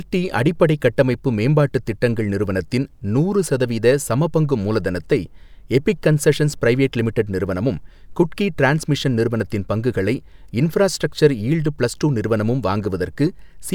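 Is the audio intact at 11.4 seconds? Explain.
Yes, at 11.4 seconds the speech plays through cleanly, with no dropout, glitch or other fault at that point.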